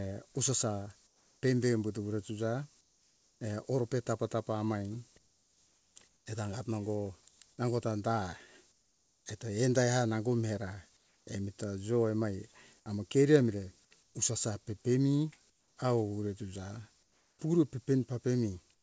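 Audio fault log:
1.07–1.43 s, 2.81–3.41 s, 5.18–7.40 s, 8.72–9.26 s, 10.97–11.27 s, 14.03–14.15 s, 15.50–17.39 s, 18.74–18.82 s: comfort noise in place of the background. Pauses lose their real background detail. A steady, featureless hiss, about 4 to 8 dB quieter, fills them instead, likely from discontinuous transmission.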